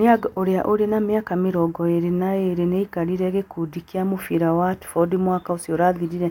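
No technical faults are audible.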